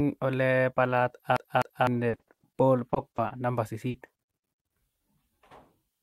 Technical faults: CD stuck on one turn; repeated packet loss (robotic sound); short concealed packet loss

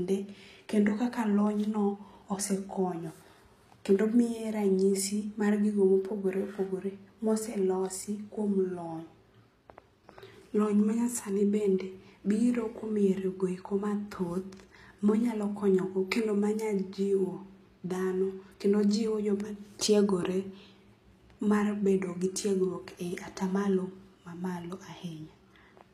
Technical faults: HE-AAC compression

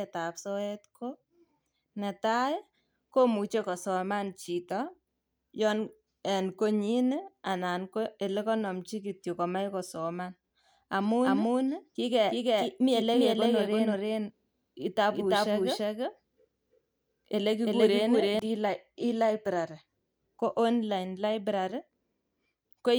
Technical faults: doubled audio track

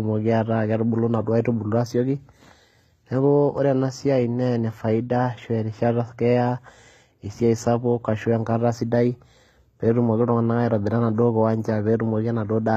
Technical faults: HE-AAC compression

